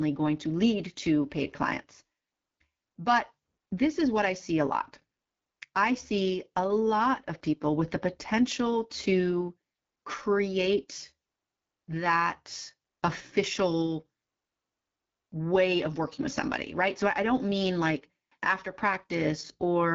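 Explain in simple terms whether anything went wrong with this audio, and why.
Something went wrong for the whole clip. The speech passed through the AMR wideband (HD Voice) codec at one of its lowest settings. The codec rebuilds speech from a simple model, so here it sounds rough and raspy, with the top end filled by hiss.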